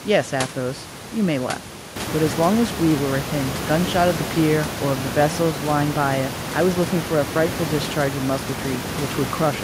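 No technical faults are present in this speech recording: the only thing besides the speech is the room's own background noise, which sits about 18 dB below the speech at first and then rises by about 11 dB around two seconds in, leaving it about 10 dB below the speech from then on.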